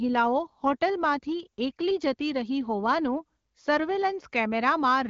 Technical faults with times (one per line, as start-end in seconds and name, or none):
none